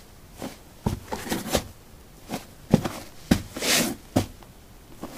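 No technical faults can be heard anywhere in these sounds, with the signal staying intact throughout.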